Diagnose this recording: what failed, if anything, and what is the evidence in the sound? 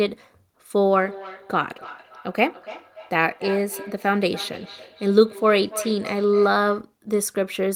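The failure is in call processing: a feedback echo between two devices. From 0.85 s to 6.93 s the speech comes back at a fixed interval of about a third of a second. The echo peaks at about 16 dB below the direct speech. Two devices in the same room share the call. One plays the other's audio, and that microphone captures it again. Each echo canceller removes only its own playback, so the loop goes unchecked.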